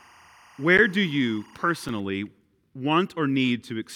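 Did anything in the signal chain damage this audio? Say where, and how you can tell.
Yes. A timecode bleed enters at the analogue wiring stage: linear timecode on an adjacent line leaks into the audio path from 0 to 2.0 s. It sits about 30 dB under the speech as a chirping warble flipping between roughly 1 kHz and 2 kHz, a rhythm that fits 23.976 fps code.

At the driver or buffer stage, two blocks of digital silence appear, likely where output buffers weren't filled in time. There is an 11.6 ms dip at 0.78 s, which fits a 512-sample buffer, and a 2.9 ms tick at 1.89 s, which fits 128 samples.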